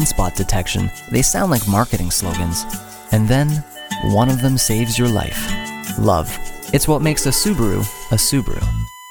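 From 7.26 s to the end, a steady 1 kHz USB whine sits roughly 20 dB below the sound. Current drawn in 1 ms bus frames leaks through power or ground, so unlike mains hum at 50 or 60 Hz, the pitch matches the frame rate exactly.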